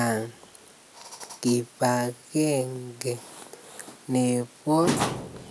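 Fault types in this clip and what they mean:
No audible faults detected.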